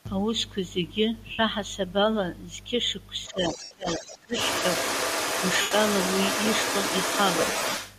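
It's a speech clip, likely over a Bluetooth LE Audio link, with a light LC3 grain. There are lost LE Audio frames at 1.32–1.39 s, 3.64–3.71 s and 5.61–5.72 s, gaps of about 70, 75 and 100 ms that fit 7.5 ms frames. Each becomes a noisy smear where the decoder fakes the missing spectrum. Another patch from 7.38 to 7.77 s drops roughly 230 ms in short bursts of up to about 40 ms. The other side's voice is leaking through at 3.25–4.18 s, about 10 dB under the talker, and again at 4.35–7.96 s, at about 5 dB under, most likely from loudspeaker playback the echo canceller didn't fully remove. In the overlap, between 3.28 and 4.33 s, speech is suppressed in double talk, with the talker's level dipping by up to around 20 dB for roughly 0.7 s in total.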